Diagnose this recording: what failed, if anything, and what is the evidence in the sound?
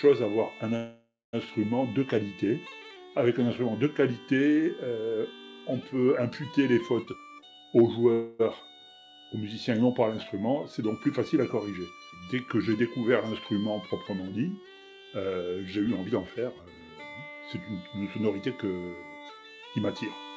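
Two call audio freezes, at 0.76 to 1.36 s and 8.12 to 8.42 s: the last sound smears into a fading buzz, going silent for the final 0.25 s of the first one. Then the audio picks up where it stopped, nothing lost, just about 0.57 s and 0.27 s added. It's likely the network held packets and the jitter buffer ran dry.

Jitter buffer speed-up, at 7.07 to 8.06 s (140% speed) and 15.77 to 17.31 s (108% speed): the sound rushes at unchanged pitch while the buffer trims pitch-period slices, dropping around 0.4 s and 0.15 s to claw back the delay. The call path's top end stops at 8 kHz, which fits G.722 at 64 kbps.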